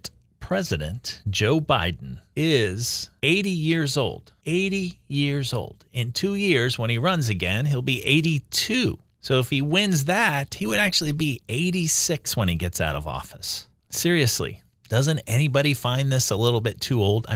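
Nothing goes wrong anywhere in this speech recording; the Opus voice compression carrying it, at 24 kbps in hybrid mode with full bandwidth, is simply doing its ordinary job.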